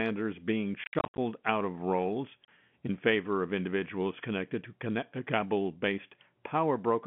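Speech, chopped by hard-edged silent holes from 0.84 to 1.18 s before "out of roles in" and from 2.45 to 2.48 s before "in favor of individuals": packet loss filled with silence, fitting 10 ms packets.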